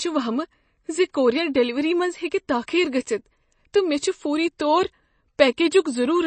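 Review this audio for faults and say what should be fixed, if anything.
Watery, swirly speech throughout, with nothing above 8.3 kHz, likely MP3 compression starved of bits and dropping weak frequency lines, which fits about 32 kbps. To prevent it, encode from the original at a much higher MP3 bitrate or use a lossless format.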